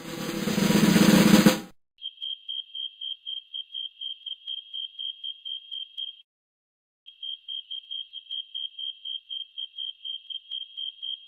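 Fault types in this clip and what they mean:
long network dropout: The sound drops to near silence from 6.21 to 7.10 s, and 600 ms never returns; a likely cause is a long gap in arriving network audio.
jitter buffer speed-up: From 7.18 to 8.77 s the audio runs hurried at 115% speed with unchanged pitch, as the receiver trims about 0.2 s of built-up delay.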